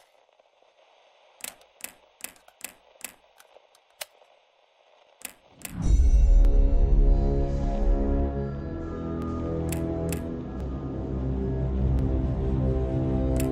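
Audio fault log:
0.93–13.37 s, clock drift buffer slips: a click or pop recurs every 1.38 s, around ten times, while sound plays. The likely cause is two unsynchronised clocks about a tenth of a percent apart, forcing a buffer to periodically drop or repeat a brief block of samples.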